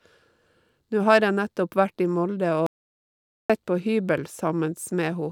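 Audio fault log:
2.66–3.50 s, audio dropout to silence: the input feed was likely lost for about 0.83 s while recording carried on writing silence, so the speech cuts off abruptly into silence with no room tone, then resumes mid-flow with that stretch gone.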